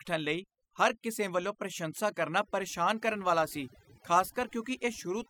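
From start to finish the speech carries overdone noise removal. The noise reduction was pushed too hard, so bands sitting near the noise floor get switched off, taking quiet parts of the voice along. You get near-silent gaps with twinkly specks.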